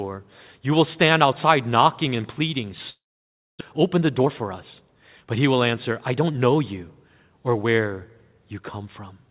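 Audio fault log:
2.9–3.63 s, long network dropout: Right after "outside knocking and pleading" the sound smears into a fading buzz, then goes quiet for about 0.6 s before returning with roughly 0.4 s gone. The receiver was filling a gap, most likely packets that never arrived in time.
3.73–6.39 s, jitter buffer speed-up: Leading up to "you or where" things run about 11% fast at unchanged pitch, so it feels a bit rushed. The buffer had built up around a third of a second of backlog and trimmed it by repeatedly snipping out tiny pitch-period slices.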